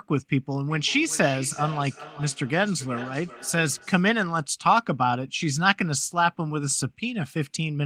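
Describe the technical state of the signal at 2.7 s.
At 2.7 s the speech sits inside a feedback echo between two devices running from 0.67 to 4.14 s. A second device replays the sound into a nearby microphone, so each syllable returns roughly every 0.4 s, peaking at about 15 dB below the speech. On a spectrogram, fainter, thinner copies trail each syllable at that spacing.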